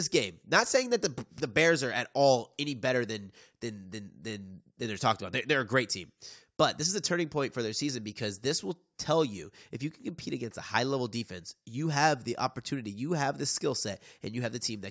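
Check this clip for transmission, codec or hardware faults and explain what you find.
Nothing in the speech points to a transmission, codec or hardware fault, so there is nothing to report.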